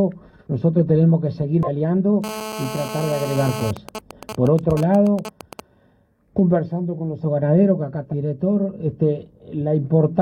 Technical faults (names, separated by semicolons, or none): compressed frames skipped; GSM phone buzz; GSM signalling bursts